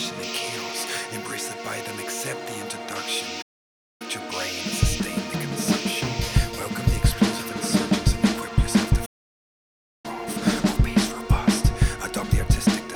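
At 3.41 s the sound cuts out for roughly 0.58 s before picking up again, and at 9.05 s it happens again, this time for close to a full second. Both are playback stalls: the output simply goes silent mid-flow, then carries on. The likely cause is the player starving for data or its thread getting held up, so nothing reached the output until it caught up.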